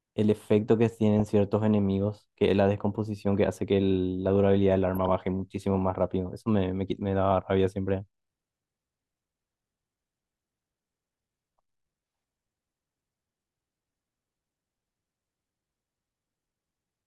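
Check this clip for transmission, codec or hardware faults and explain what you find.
Two brief bursts of DAB burbling interrupt this speech, one at about 1.20 s and a longer one from 4.94 s to 5.09 s. Weak reception lets a small fraction of bits slip past error correction, a rate of a few tenths of a percent. Corrupted MP2 samples then put short blips of noise in single sub-bands, and corrupted scale factors make sub-bands leap in level for up to a frame. The damage points to a handful of frames in each burst, more in the second. The result is burbling over the speech. On a spectrogram it appears as isolated bright rectangular patches confined to narrow frequency bands. On the waveform it shows as short, irregular spikes in the envelope.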